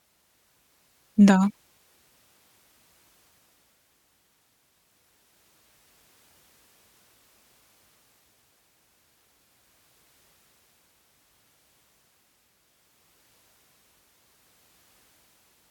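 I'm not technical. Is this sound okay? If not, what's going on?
Yes, the recording's signal is in good technical order, with nothing in it that points to a problem in how it was captured or delivered.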